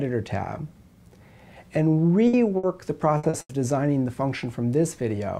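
The audio breaks up four times in a little over a second, at 2.27 to 2.35 s, 2.57 to 2.65 s, 3.17 to 3.25 s and 3.41 to 3.51 s. Each time the last sound hangs on and dies away, then the audio picks up further along. This is burst packet loss. Several packets in a row arrived too late or not at all, leaving 60 ms holes in the first three and an 80 ms hole in the last. The receiver stretched the final good sound across each hole while fading it down, and the audio that should have filled the gap is simply gone. Tucked between the third and fourth bursts, at 3.29 to 3.35 s, there is a shorter blur lasting about 40 ms. This is short concealed packet loss. A few hundredths of a second failed to reach the decoder in time, so the receiver continued the preceding sound briefly and blended back into the real signal. That leaves a quick smear rather than an audible dropout.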